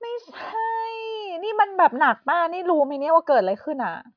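No technical faults can be heard in this recording.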